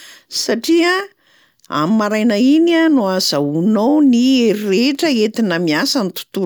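No technical faults can be heard anywhere in the recording; the speech signal stays continuous and steady from its opening to its close.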